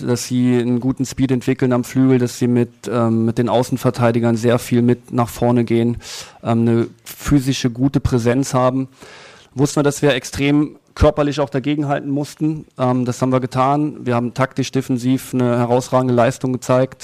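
No technical faults can be heard anywhere in the recording. There is nothing to place on the timeline.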